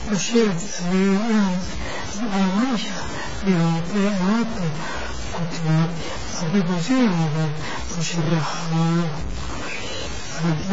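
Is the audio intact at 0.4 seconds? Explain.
No. At 0.4 s the speech carries two faults that run through the whole clip. The first is a stuck bit, likely from a broken data line or converter holding one bit fixed at 0 or 1. Roughly half the sample values are pushed off by that bit's weight, following the waveform, so the speech takes on a noisy distortion, and because the correct value of that bit flips with the sign of small values, quiet gaps fill with a hiss-like noise instead of silence.

The second is AAC compression, likely AAC-LC at a heavy setting that fits a bitrate around 16 kbps. The encoder quantises its frequency lines coarsely, discards everything above 7.6 kHz, and leaves holes or noise-filled bands in the spectrum. At this moment that makes the speech sound dull and smeared, with a watery, warbling texture on held sounds and a fizzy edge on sibilants.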